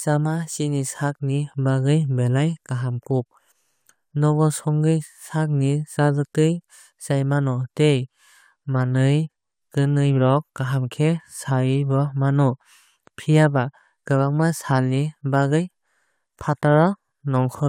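No technical faults can be heard anywhere in the speech.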